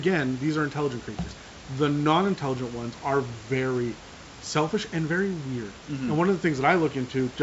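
No technical faults are present.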